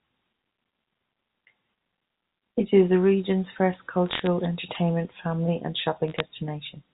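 Right after "is the region's first", from 4.09 to 4.27 s, a burst of sharp ticks breaks out. That's bit errors on a digital phone line: flipped bits in the G.711 mu-law stream each corrupt one sample, and hits on the sign or top bits jump it hard. The error rate here sounds like a few per thousand. A lighter crackle returns after "entertainment family and", 6.08 to 6.20 s.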